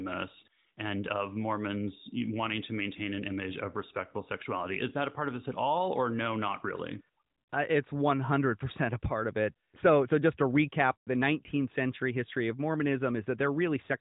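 No technical faults are audible.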